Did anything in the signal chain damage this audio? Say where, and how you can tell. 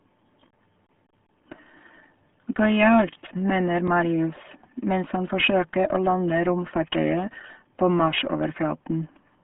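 Yes. The damage runs through the whole speech clip and sounds muffled and gargly. The sound is thin at the bottom, with little below about 150 Hz and nothing above 3.8 kHz. That heavy, bubbling smear is the signature of the RealAudio 14.4 codec. This low-rate, dial-up-era coder, which fits an 8 kbit/s stream, keeps only a coarse model of the speech band.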